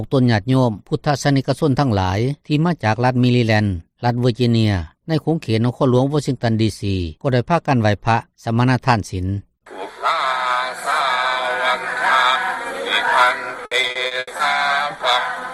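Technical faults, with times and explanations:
13.65–14.41 s, repeated packet loss (robotic sound): packets kept arriving late or not at all, and each of seven gaps, the longest 80 ms, was patched by extending the preceding sound. Concealment covers about 37% of the stretch, leaving choppy, robotic audio.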